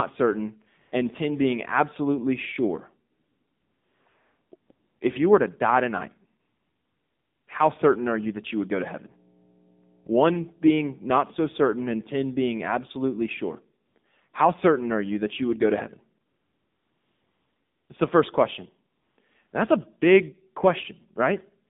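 Throughout, the speech carries AMR narrowband mobile codec damage. The band runs only from 150 Hz to 3.7 kHz, so it sounds thin and boxy. The voice is plainly buzzy and synthetic, which fits a low bitrate of around 7.4 kbps.

AMR comfort noise appears in twelve pauses, from 0.82 s to 19.52 s. The longest gaps are 3.12 to 4.06 s, 6.40 to 7.48 s and 16.26 to 17.90 s. In each one, no speech frames arrive. The receiver fills the gap with smooth synthetic hiss that switches in and out.

From 8.24 to 11.79 s, mains hum sits under the speech. It is a steady 60 Hz tone, roughly 25 dB below the speech. Power-line current is leaking into the signal, through a ground loop or a nearby transformer.

After the hum, comfort noise returns in short bursts at 13.86, 13.98 and 14.30 s. Later bursts follow at 16.26, 18.96 and 19.48 s.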